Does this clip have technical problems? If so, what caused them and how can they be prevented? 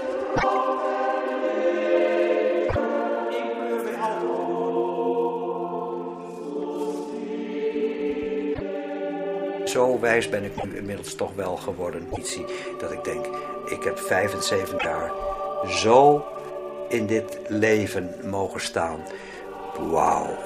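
Yes. Sample clock jitter runs through the whole clip. The converter clock wanders by a microsecond or two, so samples land slightly off time. The error sits roughly 40 dB below the signal. It adds a faint roughness on loud, bright passages. A clean, low-jitter clock prevents it.

There are also six brief glitches at 0.35–0.44, 2.68–2.76, 8.53–8.61, 10.57–10.65, 12.11–12.18 and 14.77–14.86 s. Each lasts about three 26.1 ms frames, and the sound jumps ahead. A broken MP3 bit reservoir is the likely cause: frames went missing, and the following frames read borrowed data from the wrong place. Cutting or streaming MP3 only at reservoir-safe frame boundaries prevents it.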